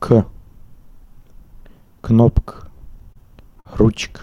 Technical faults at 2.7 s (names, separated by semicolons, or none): repeated stalls (stutter)